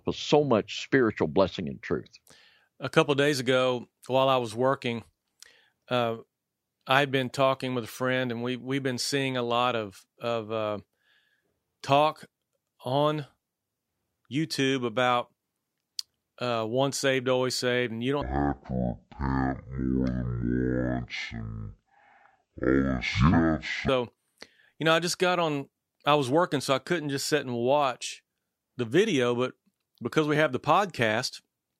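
From 18.22 to 23.89 s, just after "always saved and you", the speech slows to half speed and drops a full octave, with a faint mirrored image in the upper spectrum. This is stereo read as mono: interleaved left and right samples were played sequentially as one channel.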